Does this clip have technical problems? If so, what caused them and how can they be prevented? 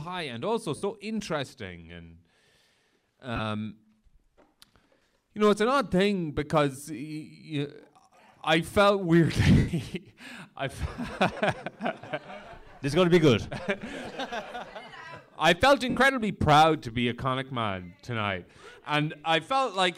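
Yes. Lost LE Audio frames at 0.76, 3.36, 9.58, 11.33 and 15.90 s, lasting 60, 37.5, 105, 37.5 and 67.5 ms, leave a brief noisy smear as the decoder repeats the last spectrum with scrambled phase. Keeping the Bluetooth link strong, with the devices close together and less 2.4 GHz interference, would prevent these dropouts.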